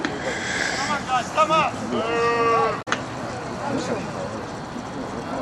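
At 2.81 to 2.88 s the audio breaks into a short glitch lasting about 70 ms, the mark of damaged data in a compressed stream. Corrupted bytes made the decoder misread those frames and lose sync until it locked onto the next valid frame header.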